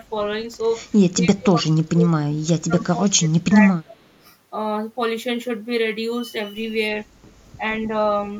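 The speech drops in level four times. At 0.00 to 0.11 s it dips by roughly 10 dB. From 1.16 to 2.15 s and again from 2.42 to 4.12 s it sinks much deeper, around 30 dB. At 7.58 to 7.63 s there is one more brief dip of roughly 10 dB. This is speech suppressed in double talk. The echo canceller likely mistook this talker for loudspeaker echo while both sides spoke, and pulled the level down.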